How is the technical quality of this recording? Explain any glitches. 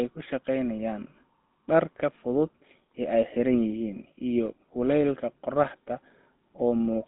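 The quality is poor, with GSM full-rate codec damage running through the whole speech clip. It models the vocal tract and drives it with coarse, regularly spaced pulses, which fits a 13 kbps rate. This gives a buzzy, gravelly roughness, and nothing passes above 3.8 kHz, with a 200 Hz to 3.7 kHz line band. A plain telephone band-limit would sound muffled but clean. The grainy buzz marks this as codec damage.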